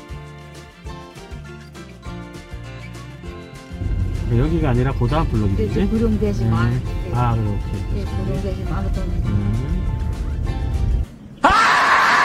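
A sudden voltage step, likely from a plug, switch, static discharge or driver glitch, enters the signal path at 11.50 to 11.53 s, producing a single loud pop that stands roughly 10 dB above the surrounding audio while the sound continues underneath it.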